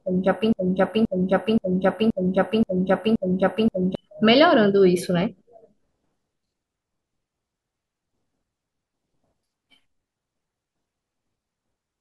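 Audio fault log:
0.53–3.95 s, broken-record loop: a 0.53 s fragment of the speech plays seven times back to back, identical each pass, and the speech meant for that stretch is lost. The likely cause is a stalled player, encoder or stream resending its last fragment.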